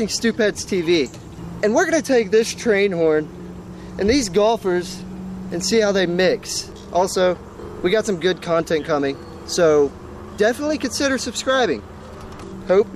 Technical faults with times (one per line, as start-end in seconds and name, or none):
none